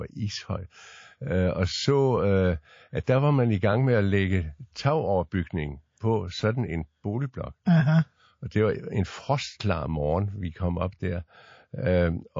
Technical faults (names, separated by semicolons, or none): MP3 compression; pre-echo